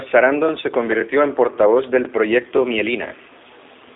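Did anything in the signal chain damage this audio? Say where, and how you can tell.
Yes. G.729 codec damage runs throughout: speech sounds rough and synthetic, confined to roughly 300 Hz to 3.6 kHz with nothing above 3.7 kHz, which fits an 8 kbit/s G.729A stream.

Overlapping chunks at 2.57 s and 3.61 s: a buffer stage restarts each chunk early, replaying 21.33 ms at the join and causing an audible stutter.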